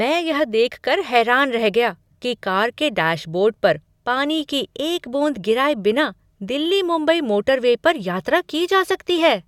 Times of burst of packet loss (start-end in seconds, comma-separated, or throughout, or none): none